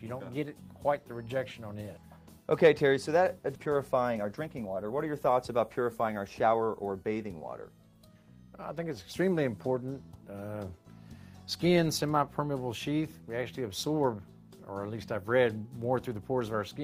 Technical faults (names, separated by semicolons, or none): skip ahead; jitter buffer speed-up